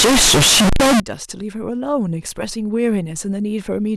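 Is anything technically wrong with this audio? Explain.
Yes. From 0.0 to 1.0 s the speech is hit by a float read as integer fault. The sound is extremely loud and harsh. The waveform is pushed into a near-square shape at an almost fixed, high level, regardless of how quiet the talking was. Background noise comes up as loud as the speech, though the pitch can still be followed. The likely cause is 32-bit float samples being read as 32-bit integers, so each sample's sign and exponent bits decide its level.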